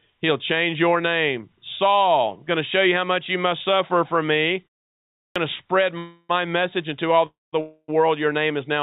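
At 5.15 s, after a pause of about 0.55 s following "must suffer for me", the output device had dropped into sleep and needed time to wake, so this is a clipped start after a pause. Roughly 0.21 s of sound, up to 5.36 s, is swallowed, and the speech leading into "to spread" bursts abruptly out of silence with its opening sounds missing. The narrowband call path, with nothing above 4 kHz in a way that fits G.711 A-law at 64 kbps, carries this lopped onset.

Three call audio freezes follow, each likely caused by packets held up in transit until the jitter buffer ran dry. The first, from 5.98 to 6.31 s just after "to spread", fills 0.31 s with a stretched, fading buzz or hiss of the last sound and only about 10 ms of true silence. The second, 7.26 to 7.55 s after "into all", fills 0.26 s, about 0.2 s of it silent. The third, 7.61 to 7.90 s, fills 0.28 s with about 40 ms silent. No speech is lost in any of them. 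Each one pushes everything after it later, so the sound stalls and then resumes where it stopped.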